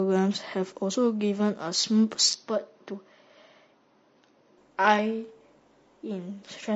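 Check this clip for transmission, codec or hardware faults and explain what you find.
Three faults are audible: codec damage across the whole recording, a brief concealment patch, and a stretch where the sound turns duller and quieter.

Throughout, the speech sounds rough and grainy, with a hiss-like fuzz between the harmonics and a thin, synthetic-sounding top end. That texture points to low-delay AAC compression, likely AAC-ELD at a low rate that fits about 32 kbps. Its short frames cannot separate closely spaced voice harmonics cleanly, and with so few bits the coder smears noise into the gaps and rebuilds the highest band only roughly.

From 1.81 to 1.84 s there is a short smeared, noisy or phasey blip. This is AAC frame loss with concealment. The gap fits a single lost frame of about 20 ms. The decoder had nothing to play there, so it patched the hole from the last good spectrum with randomised detail. 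That keeps the sound continuous but leaves a blurred moment instead of real signal.

Between 2.33 and 4.58 s the speech suddenly turns dull and boxy, with nothing above 6.3 kHz, and drops a few dB in level. A faint new background noise sits far below it, roughly 45 dB down. There is no silent gap at either edge. This is an input switched to a poorer device, likely a narrower-band microphone or headset path that was swapped in mid-recording and then swapped back.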